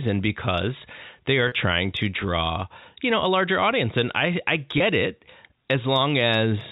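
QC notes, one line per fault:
1.48–1.52 s and 4.78–4.80 s: packet loss with pitch repetition. Gaps of about 40 ms after "because they are" and 20 ms after "audience and I I" are each filled by looping the last pitch period, giving a brief held, buzzy tone.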